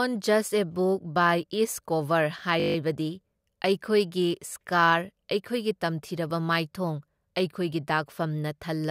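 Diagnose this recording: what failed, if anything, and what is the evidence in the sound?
The driver or buffer stage failed: the host appears to have stalled for a moment while the sound hardware kept replaying the same ring buffer, a system hang loop. From 2.6 to 2.76 s a single 20 ms slice of the speech repeats exactly, eight times over, which fits a 20 ms buffer. Cycling that fast, the repeats fuse into a flat buzz at 50 Hz rather than a stutter, and the speech then resumes with little or no audio missing.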